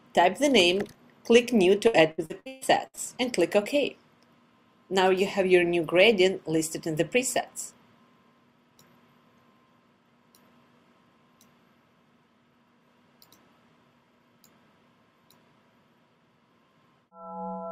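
Repeated packet loss (robotic sound) affects the audio between 1.87 s and 2.99 s. Seven dropouts, the longest 136 ms, are each filled by extending the preceding sound, so about 39% of that stretch is concealment, heard as choppy stuttering with pieces missing.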